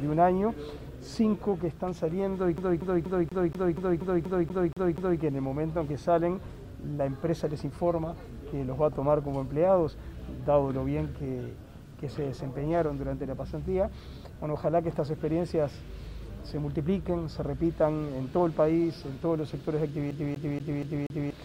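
From 2.57 to 5.21 s, and again from 20.11 to 21.31 s, the CD is stuck on one turn: a scratch throws the laser back a track, so one 0.24 s fragment repeats 11 and then 5 times, with a brief mute at each jump.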